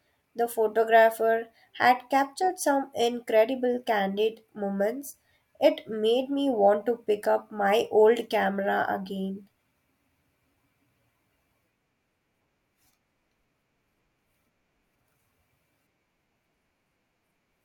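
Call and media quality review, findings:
No faults found in the speech recording. Nothing to log against any component for this clip.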